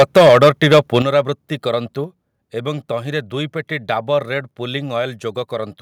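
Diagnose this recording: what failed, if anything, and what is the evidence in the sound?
From 0.00 to 0.97 s the loudest syllables carry a harsh, crackling edge, with roughly a tenth of the waveform flattened at the converter's limit. This points to microphone overload at the converter: input gain was likely set about 8 dB too high, so peaks were cut off.

At 1.02 s the speech and background noise drop together by about 9 dB in a single step, just after the distorted stretch. This is likely call processing stepping the microphone volume down once it detected clipping, cutting the device's input gain in one jump.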